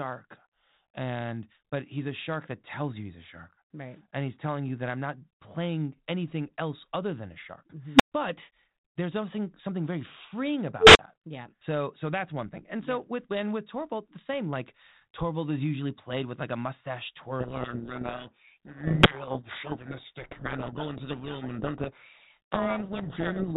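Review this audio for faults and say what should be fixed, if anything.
Two unstable filter events occur. At 7.95 to 8.12 s, a tone near 300 Hz swells over about 48 ms, clips, and then drops to 120 ms of silence. Right after "something something very freeing", at 10.8 to 10.99 s, a tone around 400 Hz builds over 150 ms, clips, and falls silent for 40 ms. A recursive filter with bad coefficients feeds its output back and grows until the numbers overflow. The filter then resets. Check filter coefficients for stability before loading them, and clamp or reset on overflow.

A codec payload misread starts at 17.4 s, just after "with like a mustache", and runs to the end. The speech is buried in harsh distortion. This fits the G.726 code words being unpacked in the wrong bit order. The decoder accepts the frames but reads every field wrongly. Before that point, the 32 kbit/s G.726 link carries only light codec damage. 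Agree the G.726 bit-packing order explicitly in the session setup on both ends.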